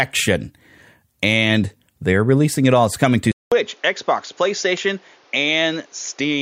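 At 3.32 s the speech drops out for about 200 ms, then returns duller and boxier, with nothing above 7 kHz, a few decibels quieter, and carrying a new noise floor roughly 30 dB under it until the end. The likely cause is an input switched to a poorer device.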